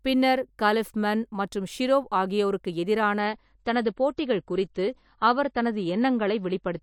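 At 3.19 s the speech abruptly loses its top end and stays dull until the end: nothing above about 8.3 kHz remains, sibilants turn smeared and watery, and swirling codec artefacts appear, with no gap at the switch. This is an adaptive stream at a lower bitrate. The player stepped down to a leaner encode partway through, and the sound points to a drop from roughly 128 kbit/s MP3 to around 32 kbit/s.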